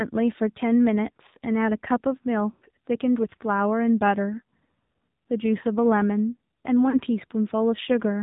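A speech recording that sounds thin, boxed-in and buzzy throughout, with nothing audible above 4 kHz and a synthetic edge to the voice. This is the AMR narrowband mobile codec at work: the signal is limited to 8 kHz sampling, and the voice is rebuilt from a vocal tract model fed by a few pulses, at a coarseness that fits one of the lower modes, around 7.4 kbps. Twice the sound briefly smears and fades before recovering roughly. From 2.52 to 2.65 s it draws out and dies away over about 100 ms, which fits five consecutive 20 ms frames being dropped. From 6.90 to 7.00 s a shorter 40 ms dip and warble fits two frames. These are lost AMR speech frames: corrupted frames were discarded, and the decoder repeated its last good pitch and vocal tract settings at falling gain until real data resumed.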